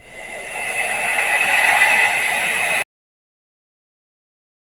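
A noise suppressor built for speech stays engaged throughout, treating sustained and decaying parts of the sound as noise. Its gain rides up and down by roughly 10 dB, so held material and tails sink while onsets pass, giving a pumping, thinning character.

From 0.00 to 0.52 s, that same noise suppressor cuts the opening sound harder, pulling it down by about 5 dB. The steady portion loses level and its decay is clipped short, leaving the start sounding withdrawn.

At 2.82 s an audio dropout to silence begins, most likely from the input signal being lost while recording continued writing silence. The sound stops abruptly mid-flow and what follows is dead silence with no room tone, lasting to the end.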